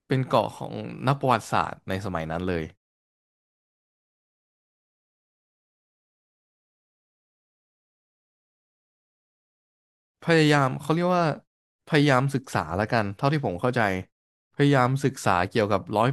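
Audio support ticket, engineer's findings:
Nothing to report on this one: listened through and found no fault to chase.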